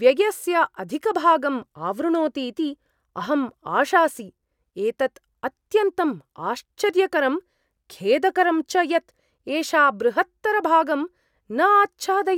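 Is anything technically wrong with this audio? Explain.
No, the speech signal shows no technical faults at any point in the recording.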